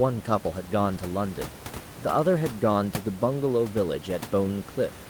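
No technical faults turn up anywhere in this speech clip. Room noise from where the microphone sits can be heard under the speech, about 14 dB below it, and that belongs to the recording itself.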